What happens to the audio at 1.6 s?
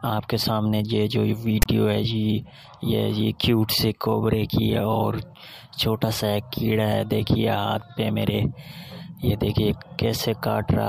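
A brief, hard-edged rasp pushed to one side, then a dropout to silence, from 1.62 to 1.66 s: file tags played as audio, with text and zero padding decoded as samples.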